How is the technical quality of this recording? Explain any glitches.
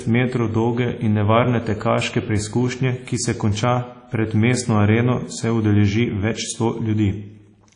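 Technical quality is compromised by audible codec damage across the whole speech clip. WMA compression throughout: likely low-bitrate transform coding, consistent with around 32 kbps, leaves washy ringing, breathing hiss and nothing above 10.1 kHz.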